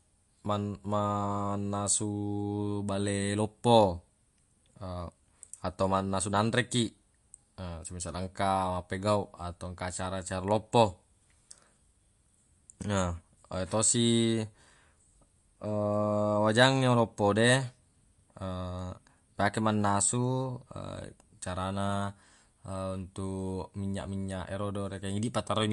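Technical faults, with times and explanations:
throughout: MP3 compression. Nothing above 11.3 kHz, a flat ceiling across the spectrogram. The plainly audible watery swirl on s sounds comes from starved frequency lines flickering on and off, seen as speckled gaps, and likely fits a low bitrate near 48 kbps.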